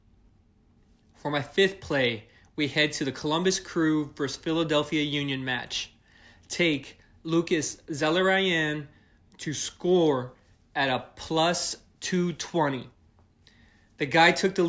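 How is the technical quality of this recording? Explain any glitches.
From 12.8 s to the end of the speech, a 50 Hz buzz rides on the signal, present only while sound is there. The resampler restarted on every block, converting each 20 ms block alone, which fits 24 kHz to 16 kHz, leaving a small error at every block edge.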